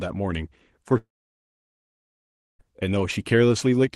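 At 0.97 to 2.61 s, a long network dropout likely halted the stream. The last sound fades as a buzz or hiss into silence, and that stretch of speech is lost.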